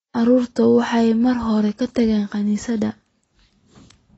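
The whole clip sounds dull and smeared, with nothing above 7.9 kHz and plainly audible artefacts, likely from AAC compression, consistent with a low-bitrate 24 kbps AAC-LC stream.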